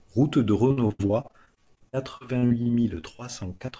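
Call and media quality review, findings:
Repeated packet loss (robotic sound), 0.68 to 3.24 s. Choppy speech with pieces missing. Probable component: network path into the jitter buffer and decoder concealment. About two dozen gaps. Roughly a fifth of the span is synthetic fill. Longest gap 76 ms. Each hole is patched by stretching the last sound. The next drop follows soon after.

Short concealed packet loss, 3.57 to 3.62 s, 3.66 to 3.70 s and 3.70 to 3.74 s. Brief smears or wobbles, each about 20 ms of lost audio. The last two run back to back. Probable component: concealment in the decoder. It extends the preceding sound over each hole, then crossfades back into received audio. The G.722 band limit, with nothing above 8 kHz, is present throughout.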